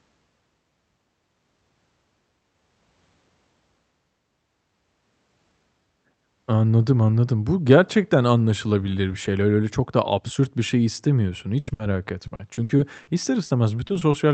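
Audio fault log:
11.59–11.69 s and 11.73–11.81 s, burst of packet loss: right after "absürt bir şey istemiyorsun", consecutive packets went missing. The last sound was stretched and faded for 80 ms, then 60 ms, and the speech resumes further on with those stretches gone.
12.27–13.09 s, repeated packet loss (robotic sound): six gaps of up to 60 ms, each patched by continuing the previous sound, fill over a quarter of this stretch. The speech turns choppy, with pieces missing.
13.45–13.51 s, short concealed packet loss: about 40 ms of audio arrived too late. The receiver extended the preceding sound and blended back into the real signal, leaving a brief smear.
13.87–14.15 s, repeated packet loss (robotic sound): four gaps of at most 20 ms, patched by continuation, cover about 29% of the span. The result is a choppy texture.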